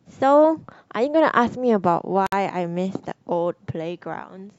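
At 2.27 s the speech drops out for about 59 ms, then picks up right where it left off. That's a gap at a join of encoded pieces: separately encoded chunks were stitched together untrimmed, so encoder delay and end padding leave a short silence with smeared edges.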